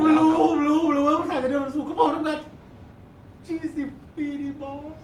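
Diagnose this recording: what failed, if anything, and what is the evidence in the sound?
Listening to the speech recording, nothing stood out that points to a failure at any stage of the chain.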